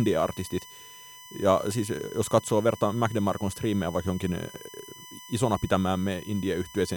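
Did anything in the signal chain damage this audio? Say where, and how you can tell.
Yes. A USB whine runs under the speech for the whole clip. It is a fixed-pitch tone at 1 kHz, strongest at its third harmonic, 3 kHz, roughly 20 dB below the speech. The bus's 1 ms frame current is leaking in through shared power or ground wiring.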